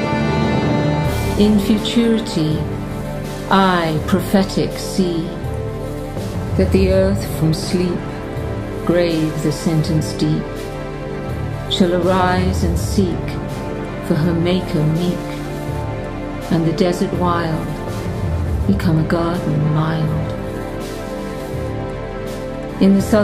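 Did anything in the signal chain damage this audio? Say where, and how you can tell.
No, nothing in the signal chain audibly damaged this audio. None of the stages, from wiring and conversion through to storage and playback, shows any evidence of harm at any point in the clip.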